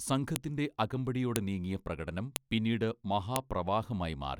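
At 0.36, 1.36, 2.36 and 3.36 s, sharp clicks cut through the speech. This is a file header played as audio. Each one-second piece kept its header bytes, which sound as a brief snap. The 1.36 s click falls just before "നീങ്ങിയ പ്രകടനം പിന്നീട്".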